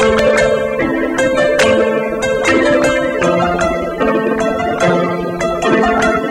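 Hard clipping runs throughout. The sound is driven about 9 dB past full scale, so a few percent of samples are flattened. Peaks crackle.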